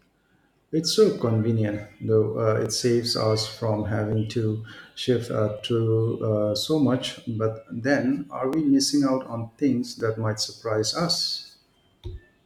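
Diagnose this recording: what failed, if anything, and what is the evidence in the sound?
A driver or buffer stage likely failed with clock drift buffer slips: regular clicks in the speech every 1.47 s from 1.19 s to 11.48 s. Mismatched clocks, off by roughly a tenth of a percent, force slips of roughly 70 samples. Network loss would sound irregular.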